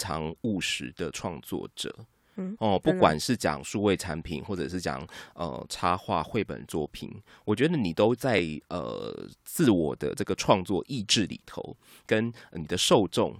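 A tiny skip in the speech lands at 8.39 s. It is an overlap between stream segments: two of the 2-second chunks claimed the same few milliseconds, and trimming that overlap removed real audio, so the waveform jumps abruptly.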